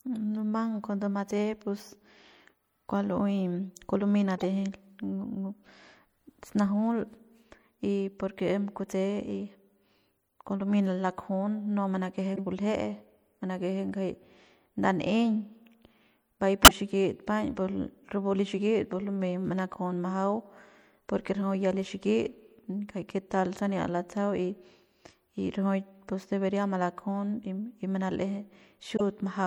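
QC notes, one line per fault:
Throughout: MP3 compression, likely at a low bitrate around 64 kbps. The sound turns watery and swirly, with s sounds chirping metallically.
4.38–4.44 s (right after "kua lumey"), 12.36–12.39 s, 16.63–16.71 s, 28.96–29.01 s: corrupt frame decoded. Each is a short glitch where damaged frames put energy at wrong frequencies. The 16.6 s one is far louder.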